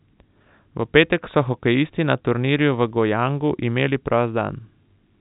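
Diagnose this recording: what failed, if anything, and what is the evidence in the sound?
Nothing failed here: the speech simply has the narrow telephone sound you'd expect from G.711 mu-law coding at 64 kbps, with nothing above about 3.8 kHz, and that's the format doing its ordinary job.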